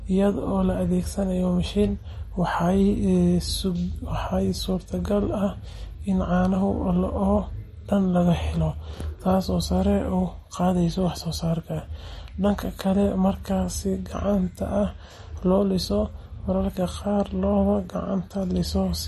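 Speech with plainly audible MP3 compression throughout. Nothing sounds above 12.6 kHz, and sibilants swirl. This likely comes from encoding at a low bitrate, around 40 kbps.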